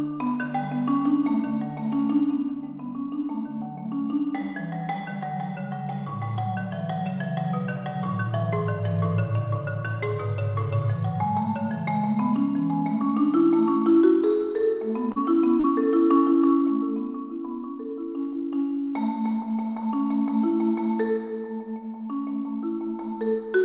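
At 15.12 s and again at 15.60 s there's short concealed packet loss: roughly 40 ms of audio went missing each time, and the receiver patched the gap by extending the preceding sound before easing back in. Each one's a quick smear or wobble, on a call path that's band-limited to 4 kHz.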